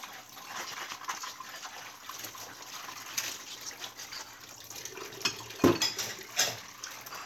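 The recording of sounds holds steady throughout, with no audible technical fault introduced anywhere along the signal path.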